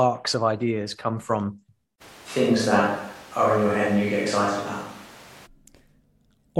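A speech clip in which the close microphone's signal likely dropped out between 2.03 and 5.45 s, leaving a distant microphone to carry the recording. The switch is abrupt: the sound turns roomy and hollow with thinner bass, and background noise rises to roughly 25 dB below the speech, while the overall level stays about the same until the close sound returns.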